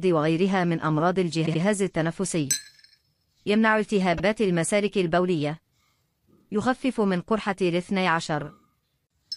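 At 1.45 s, repeated frames make a 78 ms block play three times in a row, a stutter that lengthens the audio by 157 ms. At 4.17 s a 52 ms block plays twice, adding 52 ms. In both places the decoder was handed the same compressed frames again.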